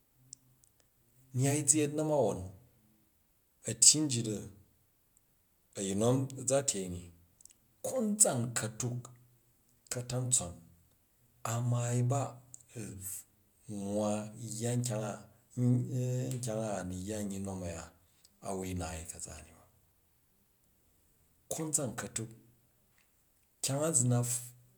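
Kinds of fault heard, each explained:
No faults turn up anywhere in this speech recording, so there's nothing here to list or explain.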